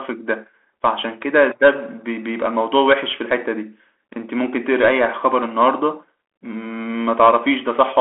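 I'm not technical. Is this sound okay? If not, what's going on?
No. For the whole clip the speech went through a Bluetooth CVSD headset codec, the basic call mode of a wireless headset. Instead of storing the actual sound, it only records a quick up-or-down nudge at each instant, adjusting how big each nudge is as it goes. It also throws away everything above about 3.8 kHz. The result is thin, phone-like speech, scratchy s sounds, distortion on loud sharp moments, and a grainy hiss underneath, all clearly noticeable.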